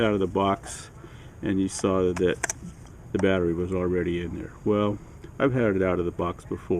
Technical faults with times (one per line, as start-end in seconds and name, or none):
none